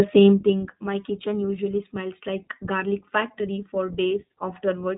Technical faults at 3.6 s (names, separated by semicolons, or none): iLBC codec